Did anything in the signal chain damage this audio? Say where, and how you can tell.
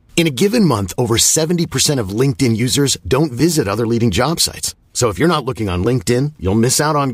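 No, no damage is audible.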